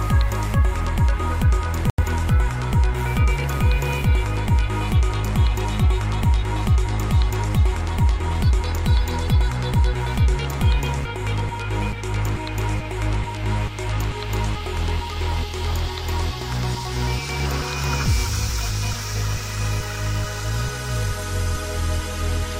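At 1.90 to 2.03 s a digital broadcast dropout mutes the sound, then brings it back mid-programme. The receiver lost valid frames and silenced its output, and the roughly 85 ms gap points to two lost frames. The sound drops to clean silence, with no hiss, crackle or smeared attempt to fill the gap, which marks it as a decoder mute rather than analogue fading or packet-loss concealment.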